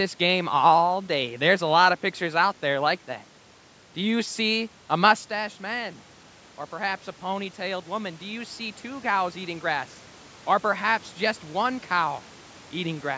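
Between 6.69 and 9.12 s the automatic gain rises. The talker moved back from the microphone around 5 s, leaving the input about 11 dB quieter, so the control slowly adds about 4 dB. Voice and room noise swell together, seen as a gradual upward ramp in the waveform envelope.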